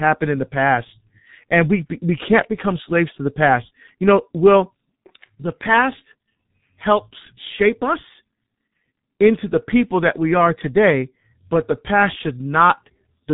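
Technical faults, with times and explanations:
Throughout, G.723.1 codec: the speech is heavily squashed, with everything above about 3.8 kHz gone, so it's muffled and hoarse and the consonants blur together. The coarse, slow-updating voice model and 30 ms frames fit a low-rate setting around 6.3 kbit/s.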